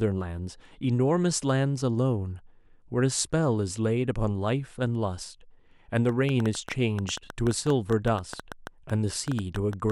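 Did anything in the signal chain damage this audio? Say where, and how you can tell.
Yes. From 6.09 s to 9.91 s a train of clicks runs over the speech, around 7.6 per second at uneven spacing, some thirty similar pulses peaking a little above the speech, audible in pauses too. Likely analogue interference from nearby equipment, not digital dropouts, which would leave gaps.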